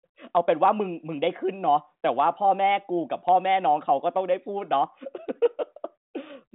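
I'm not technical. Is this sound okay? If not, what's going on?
Yes, this is ordinary telephone-quality speech carried by the G.726 ADPCM codec, which keeps nothing above 3.9 kHz, and there is no fault to be heard in it.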